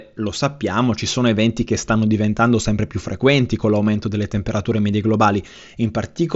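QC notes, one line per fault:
No faults detected.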